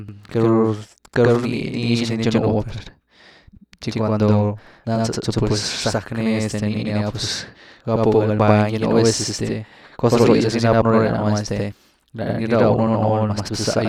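Throughout the speech, a channel delay (doubling) of 85.33 ms, which fits a 4096-sample buffer, leaves a late copy summed to mono, heard as an equal-level slap echo.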